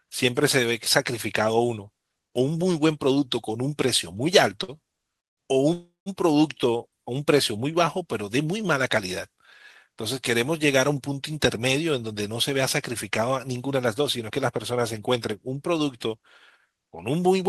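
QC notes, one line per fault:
5.73–6.09 s, call audio freeze: the speech stops and the last sound is carried on as a fading buzz that sinks into about 170 ms of silence, then the talk resumes exactly where it left off. About 330 ms has been filled in and nothing is lost, so the gap is added delay rather than a dropout. Unlike a plain packet loss, no syllable is skipped. The cause is likely delayed packets draining the jitter buffer.
13.10–15.33 s, jitter buffer speed-up: the speech runs about 8% fast and sounds hurried while the pitch stays the same, which sets it apart from a sample-rate or playback-speed error that would raise the pitch too. The receiver trimmed many short pitch-period slices in succession, roughly 200 ms in all, to pull its buffered delay back down after a backlog.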